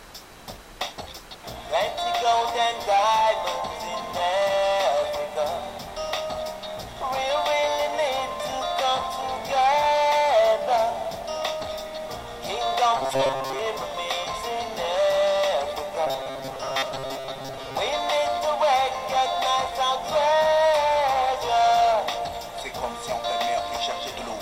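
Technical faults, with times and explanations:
12.97 to 13.59 s: robotic sound from repeated short buffers. A rigid metallic buzz at 134 Hz replaces the sound, likely a 7.5 ms chunk replayed while most real audio is skipped.
16.07 to 17.77 s: robotic sound from repeated short buffers. The same fixed 134 Hz buzz returns, likely from 7.5 ms chunks repeating for most of this stretch.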